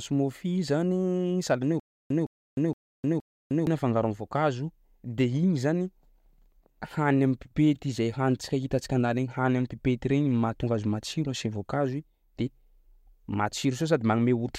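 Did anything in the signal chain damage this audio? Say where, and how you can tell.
Yes: playback likely stalled from 1.80 to 3.67 s, causing stutter with silent gaps. A 162 ms burst replays four times between 306 ms silences, just before "afangaro am'voankazo de".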